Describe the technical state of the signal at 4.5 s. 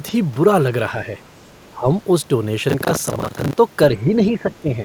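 At 4.5 s the speech is caught in speech suppressed in double talk, running from 3.92 to 4.73 s. The level sinks by up to about 10 dB. The likely cause is an echo canceller that mistook both sides talking together for echo and attenuated the talker.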